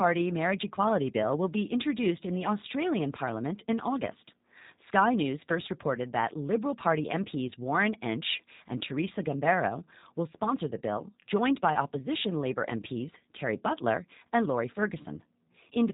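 Throughout, the speech sounds slightly rough and synthetic, with nothing audible above about 3.8 kHz, the mark of the G.729 codec at a rate that fits 8 kbit/s. It rebuilds speech from a vocal tract filter, pitch predictor and sparse pulses, discarding everything else.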